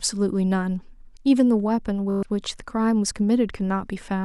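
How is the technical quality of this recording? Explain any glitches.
One glitch mars this speech recording. A Bluetooth stutter runs from 2.10 to 2.23 s: late or lost packets left the receiver replaying its last short buffer, so a brief slice repeats as a rapid buzz for about 120 ms, then the speech jumps ahead as though it had kept playing.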